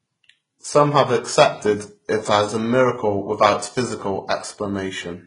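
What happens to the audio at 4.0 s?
The speech at that moment, as everywhere else in the clip, has likely gone through transcoding between lossy codecs: a very low-rate HE-AAC encode, around 12 kbit/s, was re-encoded as Vorbis at roughly 34 kbit/s. The second encoder spent its bits on the first one's damage and added its own, so nothing survives above 10.6 kHz, and HE-AAC's synthetic, swishy highs mix with Vorbis's watery smearing.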